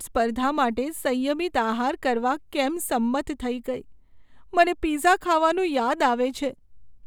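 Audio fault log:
No fault to log in this speech clip.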